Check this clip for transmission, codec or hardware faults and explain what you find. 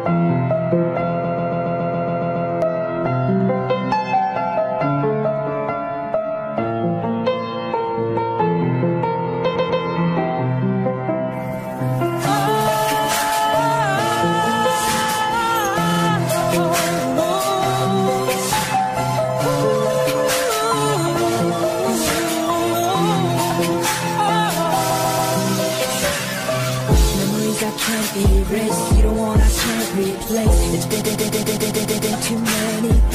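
Repeated frames occur five times, each a stutter where a short block of compressed audio plays again: 1.23–2.49 s (a 139 ms block repeated nine extra times), 9.55–9.82 s (twice), 15.91–16.0 s (a 46 ms block, twice), 24.89–25.31 s (three times) and 31.0–32.12 s (eight times). The decoder receives the same data more than once, so the clip grows by the repeated time. On a waveform the identical shapes tile side by side.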